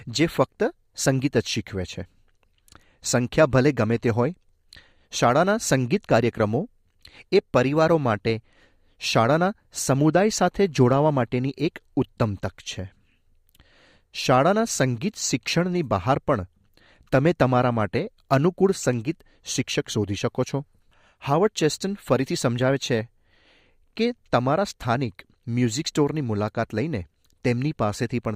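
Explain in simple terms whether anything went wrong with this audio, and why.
Nothing went wrong: I hear no technical faults anywhere in the recording, so there is nothing to report.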